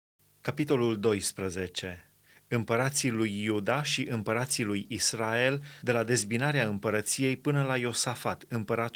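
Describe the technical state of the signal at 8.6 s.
At 8.6 s the speech is intact, with no fault present, only the light coloration of Opus voice compression running at 24 kbps in hybrid mode.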